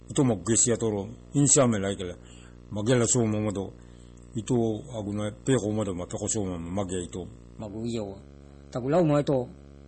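From the start, a video or display buzz runs under the speech. A screen or video cable is leaking into the audio path. The buzz sits at 59.94 Hz, the field rate of the picture, with a gritty hash riding above it. A thin, very high whine at 15.7 kHz, the line rate, is also present. The whole interference sits roughly 20 dB below the speech. It never lets up.

Throughout, the sound is also dull and watery. Nothing reaches above 8.4 kHz. The treble simply stops there. Weak detail flickers in and out, giving a swirly, metallic edge to hissing consonants. Attacks are smeared. The damage is plainly audible. The likely cause is MP3 compression at a low bitrate, which fits a rate near 32 kbps. At that rate the encoder drops the top band and zeroes quiet frequency lines frame by frame.

From 7.62 s to the end at 9.88 s, the speech turns high and hurried. This is a section at the wrong speed. It runs 1.17 times too fast. 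Speed and pitch rise together, so the voice lifts by about three semitones and sounds chipmunk-like and rushed. The shift is abrupt. The likely cause is an editor or player handling that stretch on the wrong clock.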